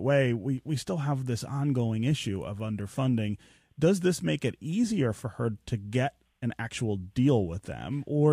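No technical faults are audible in the speech.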